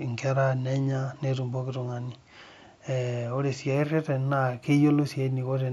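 Speech with imaging from linear upsampling from 3.75 s to the end at 5.72 s. It fits audio raised from 16 kHz to 44.1 kHz by straight-line interpolation. Faint mirror images, roughly 40 dB down, fill 8 to 16 kHz as a metallic shimmer on sibilants. Unlike aliasing, they mirror the real band above 8 kHz.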